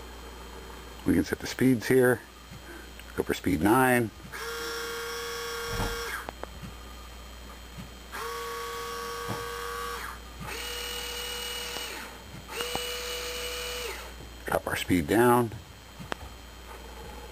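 Loud pops occur at 6.29 to 6.46 s as a double pop, at 11.77 to 11.79 s as a single pop, at 12.61 to 12.78 s as another double, and at 16.12 to 16.14 s as a single. They peak about 15 dB above the sound in the first case and about 20 dB in the rest. Each is a sharp thump laid over the audio, which continues beneath it, and likely comes from a sudden voltage step or pulse, such as a switch, plug, static discharge or driver glitch, shaped by the following circuitry.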